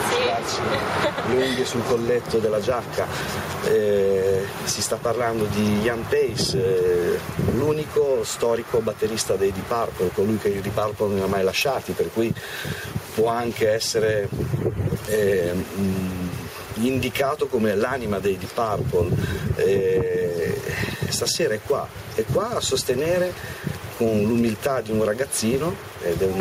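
There's gain pumping all the way through: the level swings by roughly ten decibels under each loud sound, so everything feels squashed together. The likely cause is input gain set far too high, with a fast limiter clamping down.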